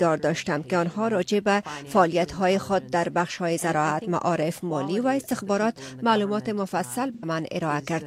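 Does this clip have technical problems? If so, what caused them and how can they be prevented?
Yes. AAC frame loss with concealment from 7.14 to 7.24 s; the decoder patched the gap from the last good spectrum, leaving a smeared, noisy smudge. Prevent it with stronger transport error protection or retransmission.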